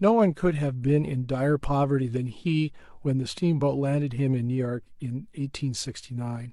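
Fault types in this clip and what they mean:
Listening through this speech recording, nothing stood out as a technical problem.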